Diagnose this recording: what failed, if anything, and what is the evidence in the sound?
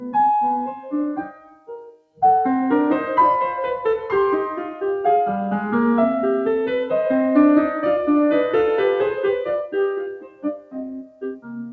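The failure is at the call-processing stage: a speech-oriented noise suppressor was left running on music. Its gain swings by around 15 dB, so held notes and reverb tails are pushed down while attacks pass, and the music pumps and thins. This differs from a compressor or automatic gain control, which respond to level. This suppressor responds to steadiness, treating sustained tonal content as noise. The band limit at 8 kHz belongs to the call codec path, not to this fault.

The sound cut by the noise suppressor shows as three distinct dips. From 0.72 to 0.93 s the level drops by about 11 dB. From 1.19 to 2.22 s a roughly one-second stretch sinks by about 21 dB. From 10.03 s to the end it falls by about 21 dB again. Each time, the sustained or decaying material sinks while transients survive. Network dropouts would instead cut everything, including attacks.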